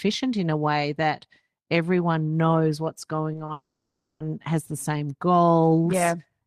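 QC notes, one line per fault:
3.33–3.49 s, repeated packet loss (robotic sound): A rapid series of short holes, none longer than 20 ms, hits this 0.16 s stretch. Each hole is bridged by extending the preceding waveform, so about 60 ms of the span is synthetic fill, some 37% of it. The rapid alternation of real and repeated fragments gives a choppy texture, and the content of those holes is gone.
3.52–4.21 s, long network dropout: About 0.68 s of audio is absent. The last sound is stretched into a fading buzz or hiss that decays toward quiet, with roughly 90 ms of outright silence before the signal resumes at 4.21 s. The missing portion is never recovered, so the sound jumps ahead on return. This pattern is likely a sustained interruption in the network stream rather than a fault at the source.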